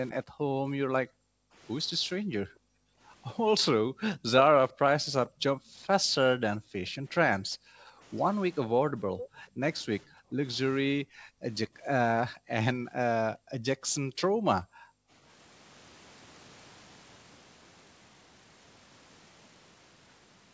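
A speech recording from a call, with the top end stopping at 8 kHz as a wideband call path would leave it. The main fault is background gated by the echo canceller. Between 0.24 and 15.1 s the room sound keeps dipping away and coming back. The deepest drops go down by about 40 dB. In total, around five seconds are affected. The canceller is clamping the microphone hard whenever the loudspeaker plays, then releasing it. There are also two brief bursts of echo leak, from 5.27 to 5.42 s and from 9.19 to 9.29 s. Each is a repeat of the speech, delayed by 446 ms. The first sits far below the talker, about 30 dB down. The second is much louder, roughly 10 dB under the speech. The likely cause is a loudspeaker at one end whose echo canceller let part of the pickup through and sent it back.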